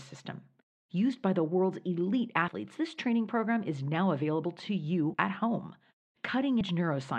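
Compressed frames were skipped at 2.48, 5.14 and 6.61 s: the decoder lost whole frames, so the speech jumps ahead by about 70 ms, then roughly 100 ms twice, which fits a 32 ms frame.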